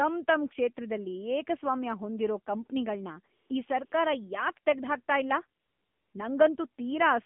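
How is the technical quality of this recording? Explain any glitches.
The recording is narrowband mobile-call speech with audible coding damage and three brief comfort-noise patches.

Throughout, the AMR narrowband mobile codec confines the voice to about 200 Hz to 3.5 kHz. A pulse-driven vocal-tract model makes it buzzy and synthetic, fitting a low 7.4 kbps mode, unlike a simple low-pass filter.

AMR comfort noise fills 3.36 to 3.50 s after "ಕ್ಷೇತ್ರದಲ್ಲಿ ಏಕಸ್ವಾಮ್ಯ ಹೊಂದಿರೋ ಕಂಪ್ನಿಗಳ್ನ", 3.86 to 3.92 s after "ಏಕಸ್ವಾಮ್ಯ ಹೊಂದಿರೋ ಕಂಪ್ನಿಗಳ್ನ ಈ", and 5.6 to 6.1 s. Speech frames stopped, so smooth synthetic hiss replaces the background. This differs from a dropout, which leaves dead silence.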